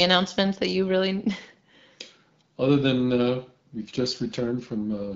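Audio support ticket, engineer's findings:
AMR rate drop, 3.78 s to end of clip. Speech turns rougher and more synthetic; no gap, bandwidth unchanged. Degradation fits the AMR-WB codec stepping down from 12.65 to 8.85 kbit/s, fewer bits for the speech model as the link trades rate for error protection. Before 3.78 s, light HD Voice coding texture. Probable component: radio link adaptation. Check link quality at onset.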